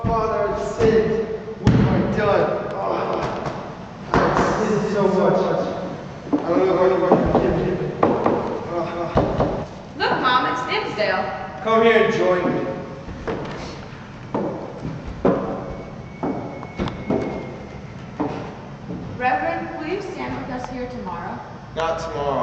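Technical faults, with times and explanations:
2.98–9.64 s, doubled audio track: a second, full-band copy of the sound runs roughly a fifth of a second behind the first, at about the same loudness, so every onset smears into a distinct slap that has no decay or room character. It cuts in and drops out abruptly at those points. That's most likely the same signal being picked up again through a slower path, or an edit leaving two offset copies stacked together.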